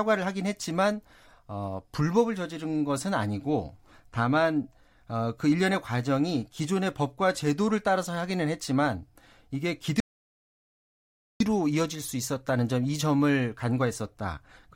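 At 10.00 s, speech cuts out mid-flow: an audio dropout to silence of 1.40 s, with no room tone, unlike a pause, likely from lost input.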